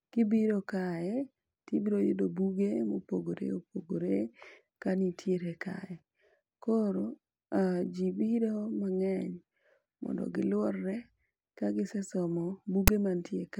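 At 12.88 s a short, hard-edged burst of static appears where file tags played as audio: a block of text metadata was read as sample data. Text bytes give a loud, one-sided rasp, unlike the full-scale white noise of compressed data or the silence of padding.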